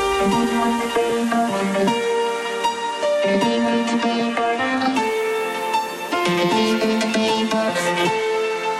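No technical faults detected.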